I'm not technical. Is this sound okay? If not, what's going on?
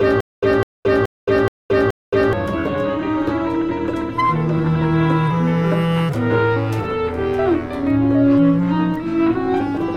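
No. From the very start until about 2.33 s, the music stutters: a short burst of about 0.2 s plays, then cuts to dead silence for about 0.22 s, and the same burst comes back, repeating five times at a steady pace of roughly two per second. This is stutter with silent gaps, most likely from playback stalling and replaying its last fragment at each retry. The music meant for those moments is lost.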